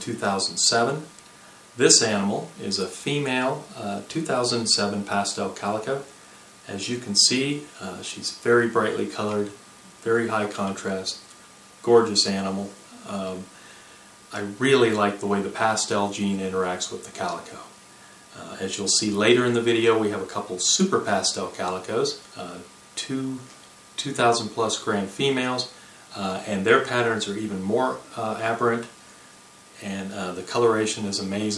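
No technical faults can be heard anywhere in the audio, which keeps a steady, unbroken signal throughout.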